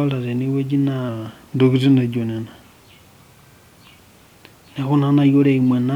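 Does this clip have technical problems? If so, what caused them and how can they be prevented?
Yes. From 1.09 to 2.74 s the speech slows by 6.4% and falls 114 cents in pitch, then snaps back. This is a drift correction step, likely a clock-matching resampler changing rate in one jump to rebalance its buffer. Small, gradual rate adjustments would prevent it.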